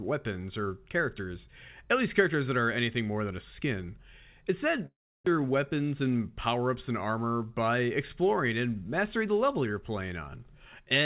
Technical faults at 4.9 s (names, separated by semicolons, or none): long network dropout